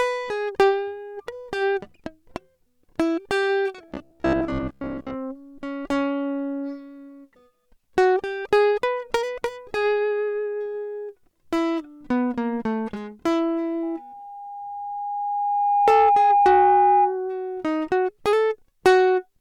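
From 3.88 to 5.16 s the music turns into robotic sound with a rigid, metallic buzz at 66.8 Hz. This is likely the result of repeated short buffers: about 15 ms segments replayed in place of fresh audio, with most of the passage repeated rather than new.

From 13.82 to 17.20 s a loudspeaker feedback squeal appears as a single 815 Hz tone. The microphone-to-speaker loop exceeds unity gain at that frequency, so the tone swells over roughly 2 s to sit about 5 dB above the music.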